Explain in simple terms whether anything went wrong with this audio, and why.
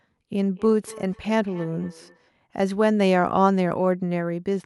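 Two devices in the same room were on the call, so one device's speaker fed its sound into the other's microphone, causing feedback echo between two devices. From 0.55 to 2.32 seconds, the speech comes back faintly about every fifth of a second, thinner and more ringing each time.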